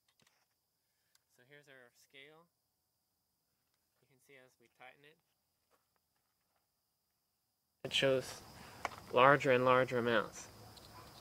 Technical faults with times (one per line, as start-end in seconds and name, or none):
0.00-7.85 one channel inverted